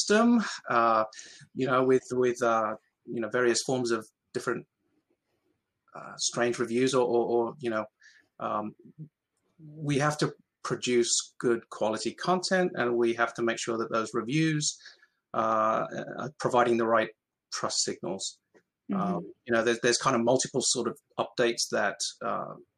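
At 15.42 to 15.54 s, a loud pop: two sharp thumps, likely from a voltage spike. Unlike a dropout, the sound carries on beneath them.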